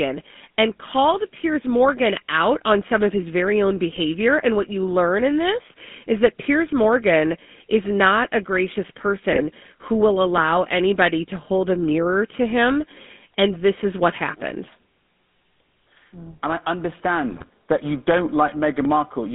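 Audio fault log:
Throughout: GSM full-rate codec. The speech sits in a band of about 0.2 to 3.6 kHz with a plainly audible buzzy, gravelly grain, which fits 13 kbps full-rate coding. A spectrogram shows nothing above 3.6 kHz and coarse, smeared harmonics below it.
3.91–3.99 s, 9.32–9.41 s, 17.30–17.44 s: GSM bit errors. Corrupted filter, pitch and gain values make the speech squawk and gargle for a few frames at a time, worst in the longest burst at 17.30 s. The spectrogram shows brief blotches of distorted energy, and the waveform shows level spikes.
14.15 s, 18.85 s: dropped samples. Each is a single sharp click, likely from about 0.7 ms of missing samples that makes the waveform jump abruptly between values. Too brief to remove audible sound, each appears as a thin vertical line across the spectrogram.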